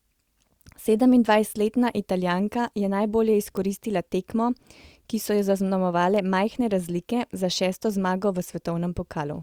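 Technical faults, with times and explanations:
3.57 s and 6.16 s, bit error spike: two isolated sharp ticks, the first just after "je najbolje" peaking at about -18 dBFS, the second quieter at about -24 dBFS. Each sounds like a single flipped bit throwing one or two samples off by a power of two before snapping back. That makes a broadband tick unrelated to the speech. Unlike a dropout click, nothing goes missing around it, and unlike crackle, it never recurs in clusters.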